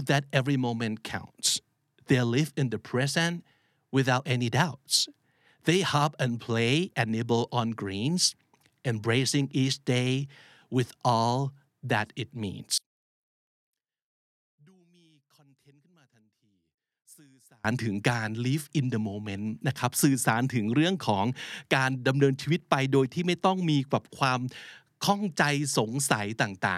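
From 12.78 s to 17.65 s the speech drops by about 34 dB when heard in mono, leaving only a faint residue before full level returns. The likely cause is one channel inverted: with one stereo channel's polarity reversed, everything common to both sides cancels on summing to mono. Centred speech and low end largely disappear, and what remains is the small difference between the channels.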